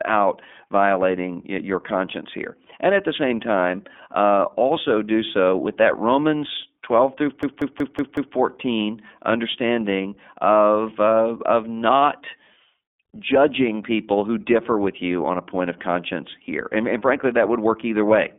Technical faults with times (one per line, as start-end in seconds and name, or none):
0.00-18.39 iLBC codec
7.43-8.36 system hang loop